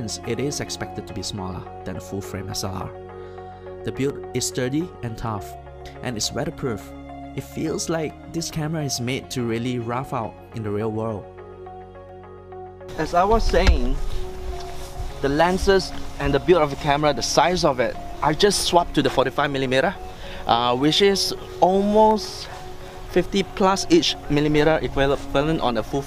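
From 0.10 s to 24.12 s there are periodic USB or driver dropouts: about half a millisecond of silence every 2.0 s, heard as regular ticks.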